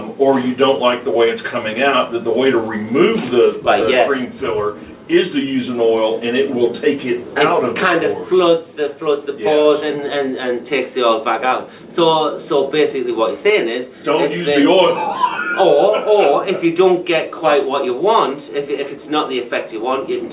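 At 9.62 s, running to 9.67 s, there is a short stall from a late packet. A packet missed its playout deadline and the jitter buffer ran dry, so the receiver stretched the last stretch of sound by about 27 ms until the data arrived. It then resumed from the same point, so nothing is lost, but one sound is briefly held too long, with a faint buzz or dip. Playout delay increases by that same 27 ms.

From 13.10 s to 13.44 s a jitter buffer speed-up follows. The buffer held more audio than its target, and the receiver trimmed it by cutting out short pitch-period-length segments in quick succession, roughly 40 ms in total. Playback runs at about 108% speed over that span with pitch unchanged, so the sound comes across as hurried before settling back. Throughout, the band-limiting with nothing above 4 kHz is consistent with the G.711 mu-law narrowband call codec.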